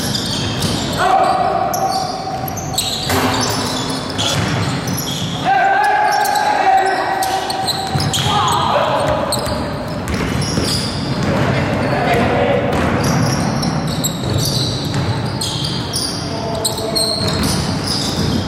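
The signal holds steady throughout, with no dropouts, clipping, glitches or other technical faults to be heard.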